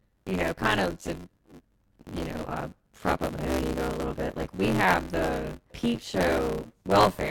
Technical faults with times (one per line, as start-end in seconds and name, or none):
0.00-7.30 buffer tearing